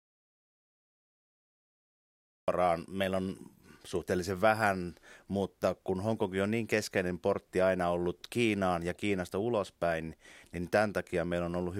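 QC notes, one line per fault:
0.00–2.48 s, audio dropout to silence: the clip opens already inside a stretch of complete silence, with no room tone at all, and the speech starts abruptly at "meillä on suhteellisen vähän" rather than fading in. The input was likely lost through a disconnect or mute while the recorder kept writing silence. The waveform shows a flat line, the spectrogram a solid black block ending in a sharp vertical edge at 2.48 s.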